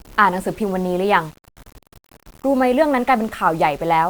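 Throughout the speech there is a grainy, gritty distortion that shifts with the sound, with quiet stretches sputtering or dropping out. This is likely low bit depth without dither: values rounded to about 7 bits, leaving error roughly 30 dB below the signal.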